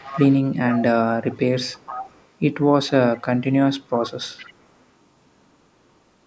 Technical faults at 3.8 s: echo leak

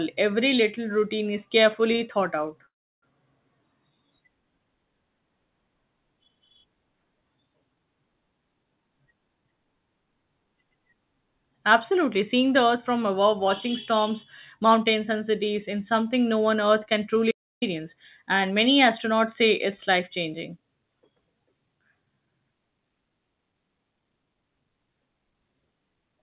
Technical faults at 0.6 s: none

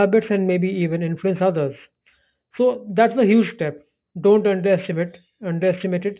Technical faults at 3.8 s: aliasing

